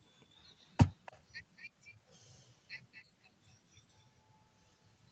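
Speech with three brief, faint echo leak scraps at 1.06–1.18 s, 1.57–1.64 s and 2.93–3.03 s. Each is a delayed copy of earlier speech, lagging 287 ms or 230 ms and sitting far below it. On a spectrogram they appear as weak, smeared repeats of preceding harmonics. The likely cause is a far-end echo canceller letting loudspeaker pickup through.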